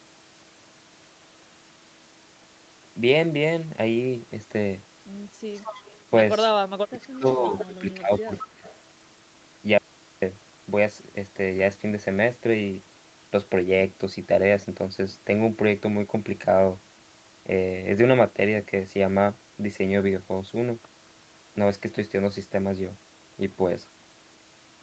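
A speech clip with a faint delayed copy of the talker trailing about 220 ms behind at 5.55–5.94 s, 6.97–7.66 s, 8.37–8.41 s and 8.64–8.79 s, sitting roughly 10 to 25 dB under the direct voice. This is an echo leak, likely from a far end playing the call on a loudspeaker whose echo canceller let part of it through and sent it back. Overlapping that, the voice sinks at 6.73–7.26 s and 7.51–8.64 s, dropping by around 20 to 25 dB in pieces. That points to speech suppressed in double talk, likely because the canceller could not tell the talker from the returning echo and turned both down. At 9.78–10.22 s the speech cuts out abruptly for about 0.44 s, leaving only mains hum some 45 dB below the signal, an audio dropout to a faint residue, likely a lost stream with the path behind it still live. The band stops at 8 kHz throughout, consistent with an Opus call path.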